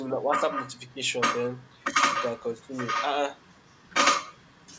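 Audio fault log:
0.50–0.73 s, 2.14–2.42 s, 2.76–3.05 s, 3.69–3.94 s: echo leak. Short scraps of the speech come back about 0.92 s after the original, consistently at that delay. The first two sit roughly 10 dB below the direct speech, the third is louder at around 5 dB down, and the last is barely audible. This is likely a far-end loudspeaker whose echo canceller let part of the returned signal through in bursts.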